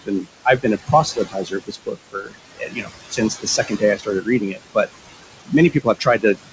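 Throughout the clip, the noise suppressor works on the room noise, which sits about 11 dB below the speech, and pulls it down by about 18 dB frame by frame. The noise pumps, sinking between words and rising under them. The top end stops at 8 kHz, as expected for G.722.

The suppressor also cuts speech, mistaking quieter parts of the speech for noise and turning them down by about 17 to 22 dB. This happens from 0 to 0.26 s, 0.45 to 0.65 s, 0.86 to 2.41 s, 2.57 to 2.93 s, 3.11 to 4.87 s, and from 5.71 s to the end. Soft consonants and word endings sound swallowed or faint, and in the stretches from 0.86 to 2.41 s and 3.11 to 4.87 s, about 0.7 s of speech is affected in each.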